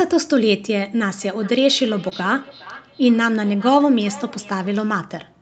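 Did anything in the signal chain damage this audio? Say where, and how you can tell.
Yes, at the network and room level. From 1.22 s to 5.06 s there's feedback echo between two devices: the sound comes back roughly every 0.4 s, peaking about 20 dB below the talker. Another device in the room is replaying the call into the mic, and the local echo canceller can't remove audio it didn't play itself.

There's also a short concealed packet loss between 2.09 s and 2.13 s, heard as a brief smear. The gap fits about one 20 ms packet arriving too late, and the receiver patched it by extending the preceding sound before crossfading back into the real audio.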